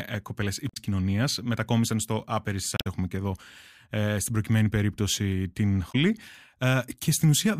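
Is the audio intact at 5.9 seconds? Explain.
No. Right after "στην προκειμένη περίπτωση την", from 5.88 to 5.95 s, the speech breaks into a brief glitch lasting about 70 ms. This is damaged data in a compressed stream: some of the encoded bytes at that point are corrupted, so the decoder misreads those frames, loses its place in the bitstream and has to search for the next valid frame header before normal decoding resumes.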